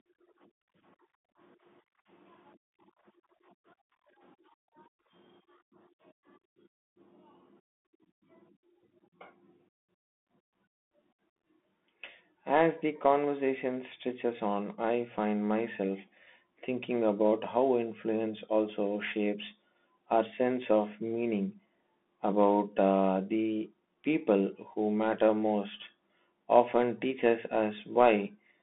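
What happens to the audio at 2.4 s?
At 2.4 s the speech carries Bluetooth CVSD headset codec damage, present throughout the clip. A one-bit coder tracking the waveform smears fast transients, leaving scratchy sibilants and granular hiss. A spectrogram shows energy confined to about 200 Hz–3.5 kHz, with nothing above 3.8 kHz.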